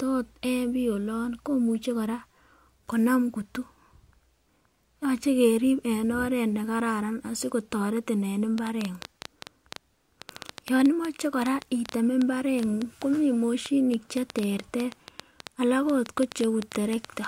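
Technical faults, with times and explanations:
8.58 to 17.26 s, train of clicks: around fifty near-identical pops, roughly 6.6 a second at an uneven pace, ticking over the speech and through pauses, peaking well above the speech level. Likely interference pulses from nearby equipment or a faulty connection or power supply.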